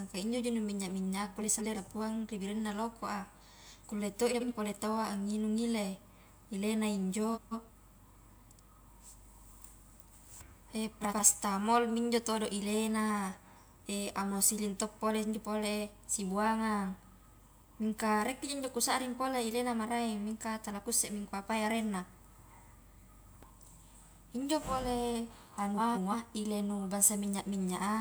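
Short garbled flutters occur at 1.41–1.78, 4.31–4.52, 7.34–7.71, 11.01–11.20 and 25.77–26.13 s, the last right after "injo pole". These are frames out of order: two adjacent blocks of 85 or 170 ms play swapped, and no time is lost.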